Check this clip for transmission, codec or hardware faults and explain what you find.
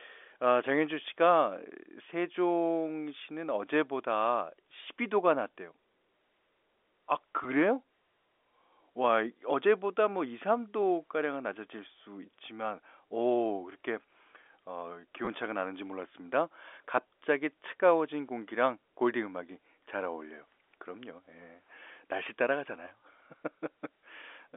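Yes, there are two brief transmission faults, both packet loss with the last packet repeated. They sit on a G.711 A-law telephone channel that passes roughly 300 Hz to 3.5 kHz.

At 7.44 s, and again from 15.25 to 15.27 s, missing audio was filled by replaying the packet before it. The gaps are 10 ms and then 20 ms, which fits one and then two 10 ms packets. The replay ignores the pitch cycle, and the longer one makes a tiny robotic stutter. Unlike a plain dropout, the sound never goes silent.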